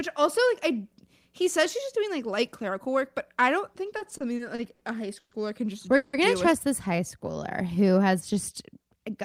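From 3.98 to 4.82 s the speech hits repeated stalls, a stutter. Packets kept showing up late, so the jitter buffer ran dry seven times in under a second. Each time, the receiver stretched the last bit of sound to cover the gap. Those gaps add up to 190 ms, with the longest at 70 ms, so close to a quarter of that stretch is filler. Nothing gets lost, but the speech lurches and drags.

Next come two call audio freezes. The first, from 5.19 to 5.32 s, runs 120 ms. The held sound fades out and the last 80 ms or so are silent before the speech picks up again. The second, from 5.96 to 6.14 s, runs 170 ms and never reaches silence. It stays a held, fading sound the whole time. Both are likely the result of packets getting held up in transit and draining the buffer. Each resumes right where it stopped, so the result is an inserted pause with no missing audio, and the delay grows by the length of each freeze.

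From 6.88 to 8.67 s there's a jitter buffer slow-down. The receiver rebuilt its reserve by repeating single pitch periods and bits of pauses, adding about 132 ms in total. The speech runs at roughly 93% speed while the pitch stays put, so sounds come out a little drawn out.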